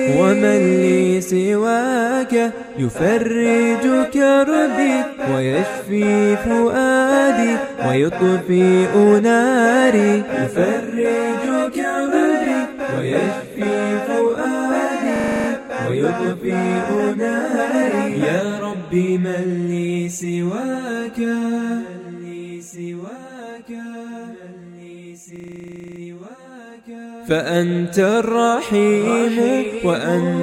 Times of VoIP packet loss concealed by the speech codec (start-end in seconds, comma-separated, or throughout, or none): none